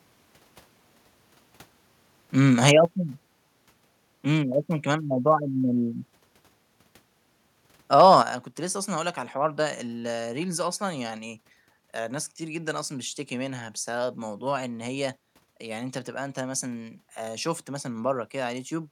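At 2.68 to 2.70 s, the loudest speech peak squares off in a brief, harsh crackle. This is microphone overload. The input was likely set too high, so the peak ran about 4 dB past the converter's ceiling and its top was cut flat. A small share of samples hit that limit. A second overload follows from 7.97 to 8.15 s. It is longer but shallower, about 2 dB over. It gives the same gritty, splintered edge on the strongest syllables.

At 2.85 s, just after the first overload, the microphone volume is stepped down. Voice and background drop together by about 4 dB in one sudden step. The call software likely reacted to the clipped peak by lowering the device's input level. At 8.22 s, right after the second overload, the level steps down again, this time by about 6 dB. The speech and the room behind it become noticeably quieter at once.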